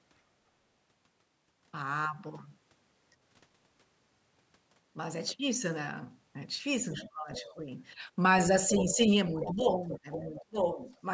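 From 6.92 to 7.53 s a faint second voice rises under the speech, roughly 20 dB below it. This is the other side's voice leaking through: the far end is most likely playing on the talker's loudspeaker, and the echo canceller has not fully removed it from the microphone. At 8.69 to 9.03 s it returns, louder at around 15 dB down. From 9.4 to 10.42 s it is plainly audible, only about 10 dB below the talker.

Overlapping the first leak, from 7.05 to 7.6 s, the talker's own speech sinks by as much as about 20 dB in patches adding up to under half a second. It happens again, over a longer span, from 9.31 to 11.05 s, with about a second of dips in all. This is speech suppressed in double talk. With both sides talking at once, the canceller likely could not tell the talker from the echo and turned everything down. The call's microphone processing, with nothing above 8 kHz, is normal band-limiting.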